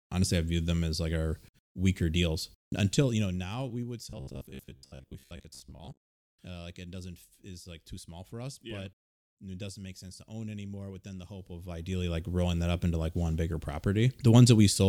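A speech recording with two kinds of technical fault. Zipper noise appears twice. From 2.72 to 3.85 s the level falls by about 15 dB. It drops in 1 dB steps, roughly 15 steps per second, with no smoothing between them. Each step leaves a small click, so a fine ticking rides on the voice as it fades. From 11.33 to 12.28 s the same fault returns on a rise of about 15 dB. Here the steps come faster, around 20 per second. Between 4.10 and 6.37 s the voice turns into robotic sound from repeated short buffers. It becomes a rigid, metallic buzz near 66.8 Hz while still loosely following the speech. That pitch fits a buffer of about 15 ms. The likely cause is audio arriving too seldom. The software refills the gaps by repeating the last buffer, and about half of the real audio is skipped.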